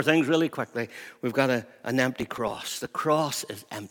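From 2.18 to 2.88 s, just after "got a an", the speech breaks into processor overload crackle. The system repeatedly failed to deliver its small audio buffers in time, pointing to buffers of about 5 ms, with around twenty missed over that stretch. Each miss skipped its block, leaving a tiny hard-edged hole, and together the holes form a gritty tearing laid over the speech. Unlike network dropouts, the gaps are too short and dense to hear singly, and the crackle stops when the load clears.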